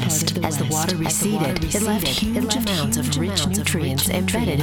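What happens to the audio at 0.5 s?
At 0.5 s there's a doubled audio track running throughout. A second full-band copy trails about 0.7 s behind, roughly 5 dB quieter, with no room colour. It's likely a second, slower capture path mixed in.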